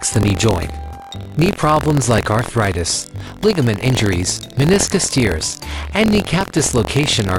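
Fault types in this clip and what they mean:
Buffer tearing: the ring-buffer writer and the hardware reader have slipped and now cross every period, so a small slice of each buffer replays audio from about 70 ms back, with hard joins. That gives a steady robotic buzz at 43.1 Hz throughout, which fits a 1024-sample buffer.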